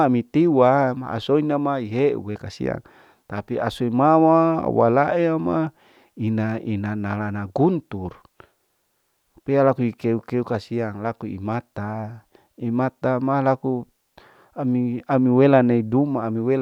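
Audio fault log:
No audible technical fault turns up anywhere in the speech signal.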